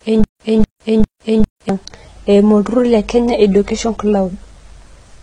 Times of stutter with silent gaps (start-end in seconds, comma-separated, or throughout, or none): 0.00-1.69